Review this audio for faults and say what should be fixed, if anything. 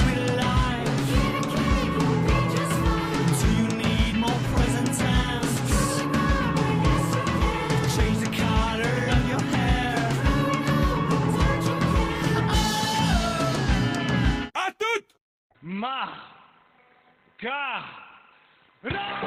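From 15.21 s to the end, adaptive stream at a lower bitrate: treble vanishes above 4.2 kHz and artefacts rise abruptly without a gap, consistent with a drop to a much lower bitrate. To prevent it, serve from a stable connection or pin the higher-bitrate rendition.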